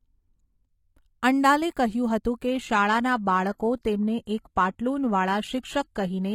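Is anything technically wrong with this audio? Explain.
Yes. From 2.47 s to the end, an adaptive stream at a lower bitrate takes over: the player switched renditions when throughput fell. The change is sudden, with no gap. Above 14.9 kHz there is nothing, the treble turns synthetic, and artefacts rise, which fits a drop from 96 kbit/s AAC to 20 kbit/s HE-AAC.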